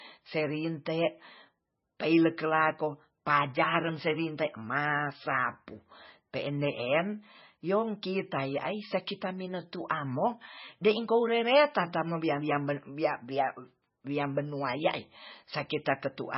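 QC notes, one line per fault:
Throughout, MP3 compression: the speech sounds watery and swirly, with a metallic chirp on the s sounds and smeared consonant attacks, and nothing comes through above 5.6 kHz, leaving it dull. The likely cause is heavy MP3 encoding, and the damage points to a very low bitrate of about 17 kbps. Short of bits, the encoder cut the treble at a fixed point and zeroed weak frequency lines, which flicker on and off from frame to frame.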